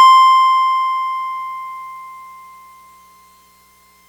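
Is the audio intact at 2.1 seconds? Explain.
Yes, the music plays through cleanly at 2.1 seconds, with no dropout, click, distortion or other fault at that moment.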